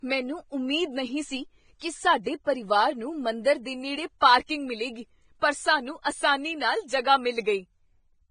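Across the whole speech clip the treble stops dead at 9.7 kHz, and what remains below it is hissy and grainy, with roughened tones and smeared consonant onsets. This is likely heavy Vorbis compression, consistent with a bitrate around 20 kbps, where coarse quantisation turns fine detail into noise.

From 4.46 to 4.49 s a pre-echo appears: a hiss of about 26 ms runs ahead of a sharp attack. The codec spread quantisation noise across its transform block, filling the quiet moment before the attack and softening it.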